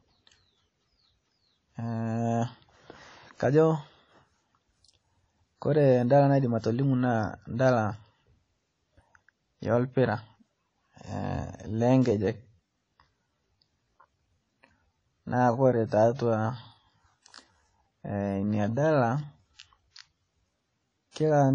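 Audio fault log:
Throughout, WMA compression: the audio likely passed through a WMA transform codec at a low rate, consistent with about 32 kbps. Nothing survives above 9.9 kHz, and plainly audible quantisation noise rings and washes around the speech, breathing with it.
6.60–6.64 s, 12.02–12.05 s and 21.11–21.16 s, pre-echo: the codec spread each block's quantisation noise into the quiet moment before a sharp onset. A hiss lasting 36, 34 and 47 ms respectively leads each attack, which sounds softened and smeared.
11.32 s to the end, time-stretched section: software likely slowed this part to 0.695 times its original speed, holding the pitch by repeating short pieces. The pace drops abruptly while the pitch stays the same, so the speech drags from that point on.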